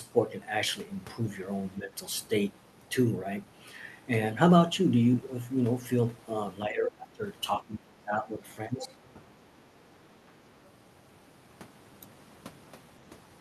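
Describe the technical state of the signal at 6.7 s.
At 6.7 s the speech is suppressed in double talk from 6.66 to 7.24 s, dipping by up to about 20 dB, likely because the echo canceller mistook overlapping talk for echo. The waveform visibly shrinks there and the spectrogram thins out.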